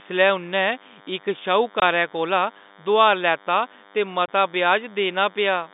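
Running under the whole speech clip is a DECT cordless phone buzz: a nearby handset or base's 10 ms radio bursts get rectified, giving a thin 100 Hz buzz roughly 30 dB down. At 1.80 to 1.82 s and again at 4.26 to 4.28 s, there's packet loss filled with silence, with 20 ms hard-edged holes, each fitting a single lost packet, carried over the narrow G.711 telephone band.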